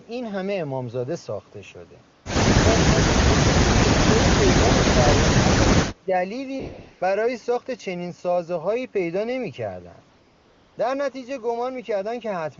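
At 2.13 to 2.25 s the background gives way to a smooth, even hiss for 0.12 s. This is AMR comfort noise: the phone stopped sending speech frames and the receiver filled the gap with synthetic noise built from a rough level and spectrum estimate. Unlike a plain dropout, the gap is not silent. Unlike a noise gate, the fill has steady, featureless texture rather than the real room sound.

At 4.91 to 4.95 s the sound plunges by about 25 dB for roughly 40 ms. From 5.82 to 6.11 s it sags by about 15 dB for around 0.3 s. These dips are likely speech suppressed in double talk, where the echo canceller, unable to separate the near talker from loudspeaker echo, turned the signal down. They differ from packet loss because the level ducks instead of breaking into clicks or repeated fragments.

The same comfort-noise switching returns at 6.59 to 7.01 s (0.42 s) and 10.09 to 10.77 s (0.68 s). The wideband codec sound is clean, consistent with a high AMR-WB rate.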